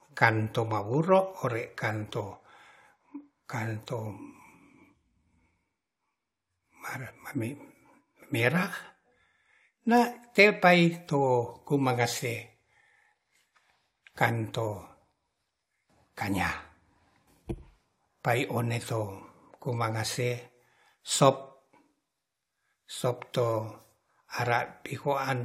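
At about 17.27 s the speech suddenly jumps forward with a tiny blip, and it doesn't pick up where it left off. That's most likely a stream segment skipped: one chunk of the segmented stream never loaded, so the player dropped it and carried on with the next one. The blip is just the join between the two pieces. The part of the recording that chunk held is gone, so the listener simply loses that bit of the talk.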